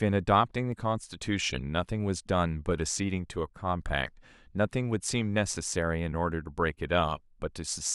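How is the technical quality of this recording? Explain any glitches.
There is one glitch, a single click at 0.72 s. That is likely dropped samples: a fraction of a millisecond of the stream went missing, so the waveform jumps abruptly and produces one sharp click.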